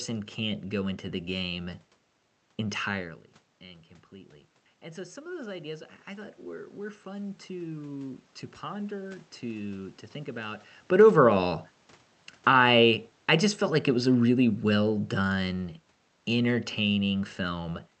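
A speech recording heard through a call path, with an automatic gain rising fault from 4.09 to 11.41 s, just after "entirely and." After the talker moves away near 3 s and the input drops about 16 dB, the gain control slowly adds about 7 dB, so voice and room noise swell together. On a waveform the envelope and the noise floor climb as a gentle ramp. An automatic gain falling fault follows from 12.31 to 15.54 s, after the talker moves again near 10.5 s. The gain sinks by about 5 dB, so the voice and its background fade down together, and the waveform shows a matching downward taper, noise floor included. On a spectrogram both changes appear as broadband brightening and then darkening across every band, not as a change in tone. The content stops sharply near 8 kHz, which fits a wideband Opus call codec.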